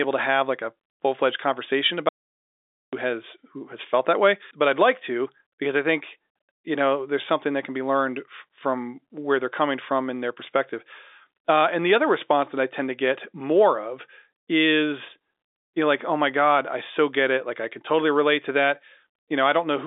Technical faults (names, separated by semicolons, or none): audio dropout to silence